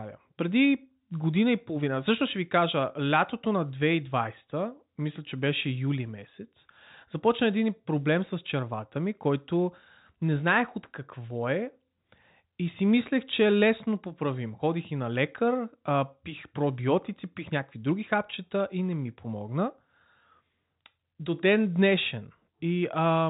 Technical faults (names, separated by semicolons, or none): none